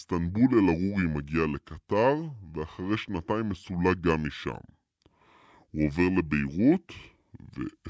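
Throughout the speech, the samples play back slower than they were captured, with no rate conversion, a wrong sample rate that fits a 22 kHz recording played at 16 kHz. Everything runs at 0.726 times normal speed and sits about 5.5 semitones low, so voices sound deep and dragging.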